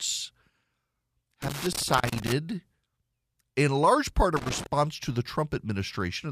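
Speech recording with two bursts of loose connector crackle, the first from 1.42 to 2.32 s and a shorter one from 4.37 to 4.66 s. Each burst is an irregular scratching and crackling laid over the signal. That is the sound of a worn or dirty contact repeatedly making and breaking as the plug or cable shifts. The audio is chopped in and out.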